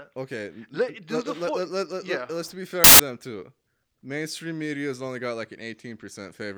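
At 2.84 s, right after "let yeah let's be", the speech gives way to a burst of loud, harsh broadband noise lasting about 0.15 s, until 3.00 s, just before "them too". This is a case of samples built from the wrong bytes: the reader assembled each sample from misaligned or swapped bytes, so the rapidly changing low-order bits landed in the high-order position. The result is dense broadband hiss in place of the signal.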